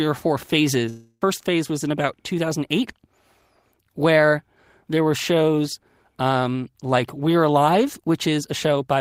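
A long network dropout runs from 0.89 to 1.22 s. For about 320 ms the last sound is drawn out as a fading buzz or hiss, then about 30 ms of silence follows, likely because packets stopped arriving. The speech resumes afterwards, with the lost stretch gone.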